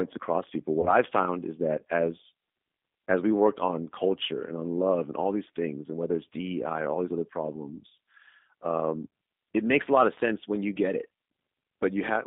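Throughout, the speech passes through a G.729 codec, which fits an 8 kbit/s stream, confining it to roughly 200 Hz to 3.6 kHz and giving a plainly rough, synthetic texture. From 0.81 to 0.92 s, packet loss concealed by the speech codec, pointing to a single 20 ms packet lost, stretches the sound into a fading buzzy tone or coloured noise that stays weak briefly afterwards.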